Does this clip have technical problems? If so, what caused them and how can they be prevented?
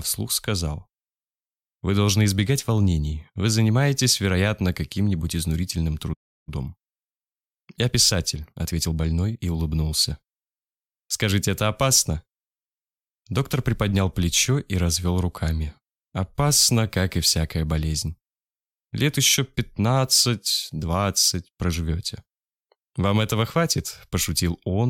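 Yes. At 6.13 s the sound halts in mid-flow and stays silent until 6.49 s, a playback stall of about 0.34 s. The player was likely starved of data or had its output thread blocked. Keeping a larger playback buffer and running audio output on a high-priority thread that never waits on network or disk work prevents this.

From 6.49 s to 9.49 s the audio runs at 1.1 times normal speed. This is time-compressed catch-up: to recover the delay left by the stall, the player cuts out small slices and cross-fades across the joins. The pitch stays where it was, which separates this from a simple speed-up or clock drift, where everything would also sound higher. Preventing the stall removes the need for catch-up, and a gentler rate spread over a longer span would make any remaining catch-up less audible.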